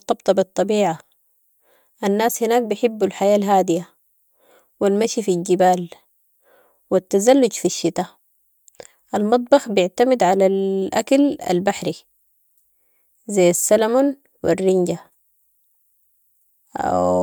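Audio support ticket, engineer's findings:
Nothing stood out on listening to the speech, and no fault finding is raised for this clip.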